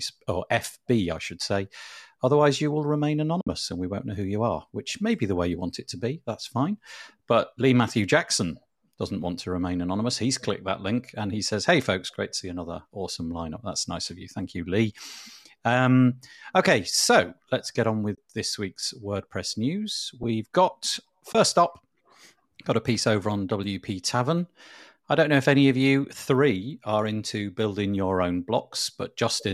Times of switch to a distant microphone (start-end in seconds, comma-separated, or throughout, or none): none